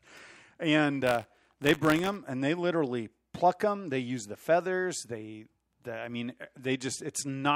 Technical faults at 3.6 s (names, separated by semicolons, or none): none